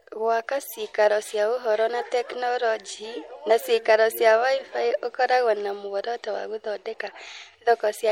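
MP3 compression damage runs through the whole speech clip, from start to finish, and is plainly audible. The detail has a watery, swirling texture, with s sounds turning metallic and consonant attacks smeared. That fits an encoder short of bits, which trims the treble and drops weak frequency lines that flicker on and off between frames. The cause is likely low-rate MP3 encoding, consistent with a bitrate of about 64 kbps.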